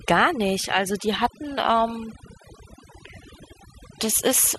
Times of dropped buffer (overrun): none

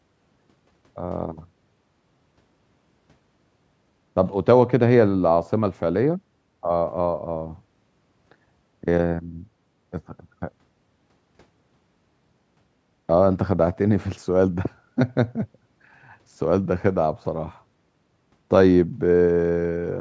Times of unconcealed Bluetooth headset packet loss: none

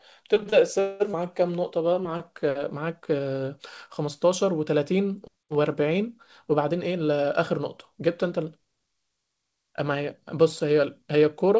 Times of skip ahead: 1.12-1.15

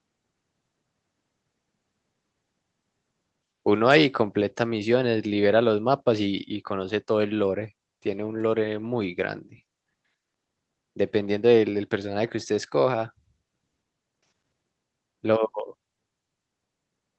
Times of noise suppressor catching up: none

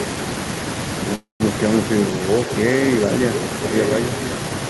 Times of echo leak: 3.35-3.45

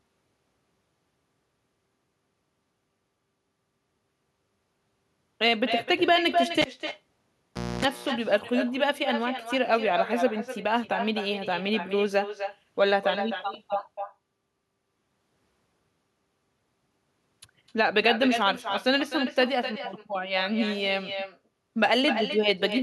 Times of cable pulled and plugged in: 6.61-7.85

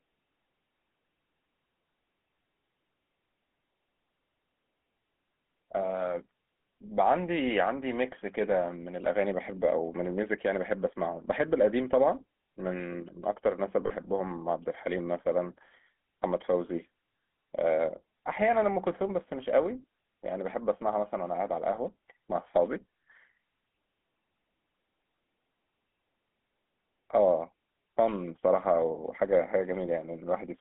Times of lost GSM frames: 13.86-13.91

